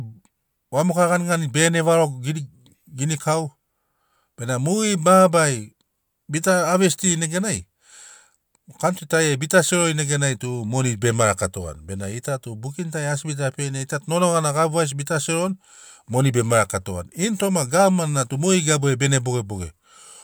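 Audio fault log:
No technical faults are audible anywhere in the speech recording, and the signal holds steady from its opening to its close.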